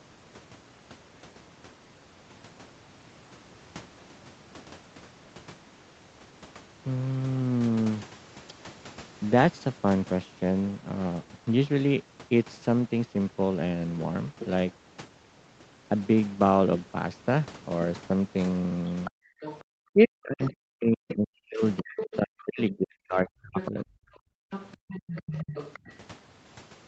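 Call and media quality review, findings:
Other side's voice leaking through: far-end talker audible under the speech at 18.89–19.64, 20.45–20.51, 22.0–22.16 and 23.58–25.79 s, roughly 10–20 dB down. Likely residual echo the canceller didn't fully subtract.

Speech suppressed in double talk: near-end voice ducks and chops while both sides talk, 19.93–23.88 s (very deep dips, about 3 s total), and briefly around 25.3–25.91 s. Likely the canceller clamping both during overlap.

Background gated by the echo canceller: room tone drops by about 40 dB between 24.17 and 24.88 s, about half a second in total, while far-end audio is playing. The suppressor clamps the mic hard, then releases.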